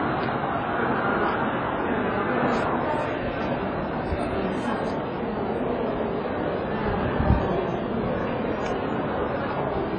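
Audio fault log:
throughout: transcoding between lossy codecs. Nothing comes through above about 9.9 kHz, so the top end is dull and closed in. On top of that, two different flavours of coding damage sit together: a smeary, swirly low-bitrate texture with a synthetic-sounding upper band, plus a second layer of warbly, grainy artefacts. That mix likely comes from a very low-bitrate HE-AAC encode being re-encoded to WMA 1 at a modest rate. The second codec wastes bits on the first one's mess and adds its own, while the earlier cut-off stays put.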